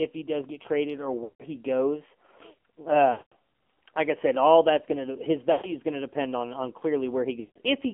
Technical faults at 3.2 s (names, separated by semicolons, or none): AMR narrowband mobile codec; lost AMR speech frames